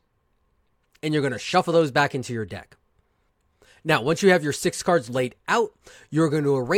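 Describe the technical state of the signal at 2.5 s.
At 2.5 s the speech signal is intact, with no audible dropout, click, distortion or other technical fault.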